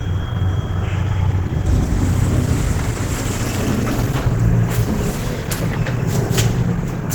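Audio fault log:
Throughout, Opus compression: the damage is plainly audible across the whole clip. Energy still reaches about 20.2 kHz, so the band is not narrowed, but tonal parts come out rough, grainy and noisy rather than clean, with a muffled, hoarse quality underneath. The likely cause is an Opus encoder running its hybrid mode, with a speech-style coder on the lower band and filled-in noise above, which fits a starved bitrate near 16 kb/s.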